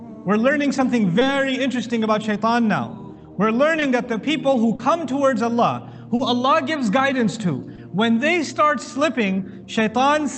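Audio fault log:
1.19–1.23, 3.79–3.83, 4.75–4.81, 6.15–6.21 and 7.75–7.79 s: short concealed packet loss. Each time, a brief stretch of the call audio arrived too late for the decoder. The receiver patched the gap by extending the preceding sound and then blending back into the real signal. The patches at 4.75 and 6.15 s are longer, about 40 ms against 20 ms for the rest. Each one is heard as a short smear or wobble, with the top end of the call band stopping near 8 kHz.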